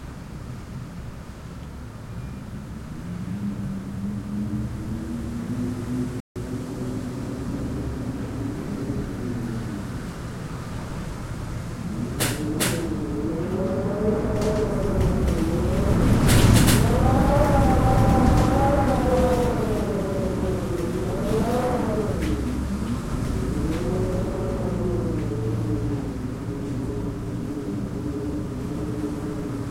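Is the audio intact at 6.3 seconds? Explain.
No. At 6.3 s the sound is stopped by a rebuffering stall from 6.20 to 6.36 s: the player ran out of downloaded audio, fell silent, then resumed exactly where it left off. Unlike a dropout, nothing is skipped; about 156 ms of time is added.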